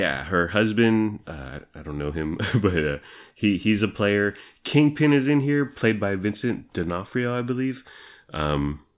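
Speech recording, no technical faults detected on listening.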